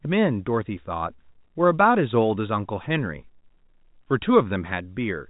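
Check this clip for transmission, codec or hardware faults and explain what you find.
Nothing stood out on listening: the speech carries the usual narrow telephone band of G.711 coding, with nothing heard above about 3.8 kHz, and there is nothing to report.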